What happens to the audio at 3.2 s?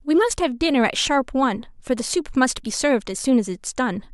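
Nothing goes wrong at 3.2 s; the speech carries on intact through that moment.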